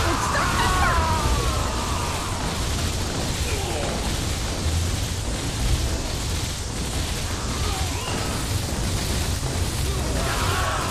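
From 0 to 8.01 s the audio has a wrong sample rate fault. It runs at 0.919 times normal speed and about 1.47 semitones flat, with pitch and tempo dropping together. That ratio fits 48 kHz material played back at 44.1 kHz without conversion.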